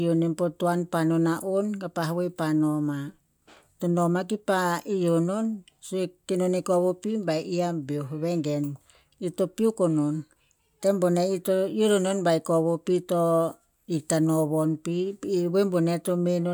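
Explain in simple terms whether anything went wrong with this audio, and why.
Nothing went wrong with it.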